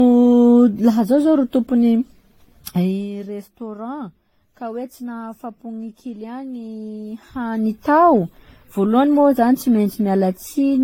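Right from the start the speech has a swirly, hollow, smeared quality, with softened attacks and nothing above about 16.6 kHz. That's generation loss, most likely from roughly seven rounds of lossy coding, which fits AAC-LC at around 64 kbit/s. Each pass adds its own quantisation noise and spectral holes.

From 2.68 to 3.09 s there's zipper noise. The level drops by roughly 15 dB in unsmoothed steps, about 200 a second, and each step leaves a tiny click, so you hear a fast ticking buzz riding on the sound during the dip.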